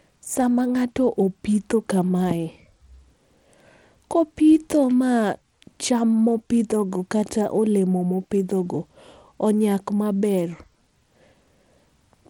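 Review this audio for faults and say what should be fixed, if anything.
Throughout the speech, the treble flickers and drops out under a gritty, aliased grain, likely Bluetooth SBC compression starving its upper sub-bands of bits, consistent with a rate around 96 kbps. To prevent it, record on the device itself or over a wired connection rather than through a Bluetooth link.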